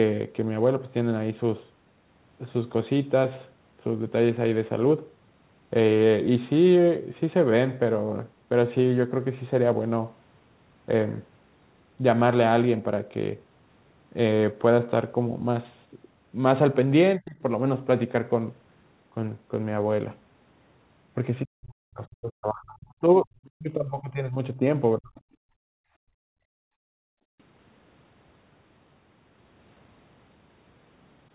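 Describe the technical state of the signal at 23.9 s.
At 23.9 s the speech is pushed far down, dropping by around 40 dB so that it nearly vanishes or survives only as thin, broken fragments. This sits inside a stretch from 21.42 to 24.62 s, about three seconds in all. The likely cause is speech suppressed in double talk: with both ends talking at once, the echo canceller could not tell the near talker from returning loudspeaker echo and attenuated everything together.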